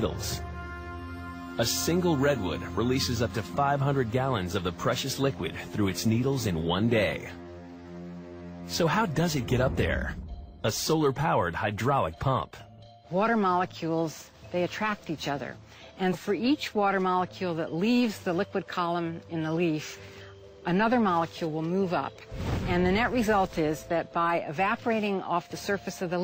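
Nothing stood out on listening; there is no technical fault to point to anywhere in this audio.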